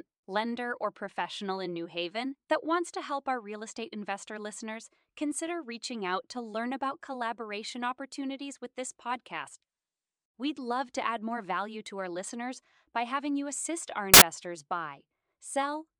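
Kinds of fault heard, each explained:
Samples built from the wrong bytes: a sudden blast of loud, harsh broadband noise lasting about 80 ms, from 14.14 to 14.22 s, before the clip snaps back to normal. For that stretch the reader assembled each sample from misaligned or swapped bytes, so the rapidly fluctuating low-order bits landed in the high-order positions and became the bulk of every value, turning ordinary speech into loud noise.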